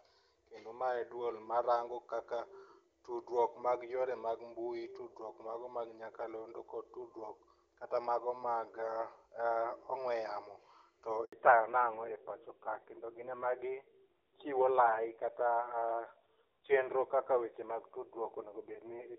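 At 11.25 s, right after "ong'we yamo to", a handover gap drops the speech out for 80 ms, until 11.33 s. The voice fades within a few tens of milliseconds into true silence while the call switches networks. Unlike packet loss concealment, nothing is filled in, and the syllables spoken during the gap are simply gone.

From 11.33 s to the end there is a fallback to narrowband. Before this point the HD Voice sound is clean and airy, consistent with high-rate AMR-WB. Afterwards everything above 4 kHz is missing, and the voice turns duller and rougher, which points to a low-rate narrowband codec. A lowpass filter would muffle the sound without adding that coding roughness.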